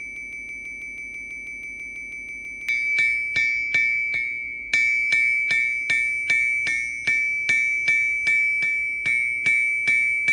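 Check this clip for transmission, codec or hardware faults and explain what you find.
There's one fault, right at the top. From the start to 2.69 s there's a broken-record loop, already running when the clip begins: a 163 ms fragment repeats exactly, back to back, 15 times. It's likely a stalled player or stream resending its last buffer, so whatever should have played there is gone.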